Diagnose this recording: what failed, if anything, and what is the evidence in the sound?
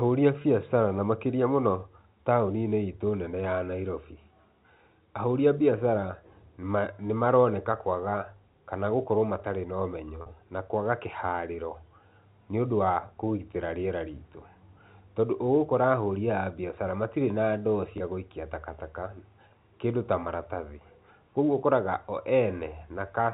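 Packet loss with pitch repetition at 0.42–0.44, 10.22–10.26, 17.98–18.00 and 19.48–19.50 s, a network fault. Each 20 ms gap (40 ms at 10.22 s, fitting two lost packets rather than one) was bridged by repeating the last pitch period, leaving a brief held, buzzy patch.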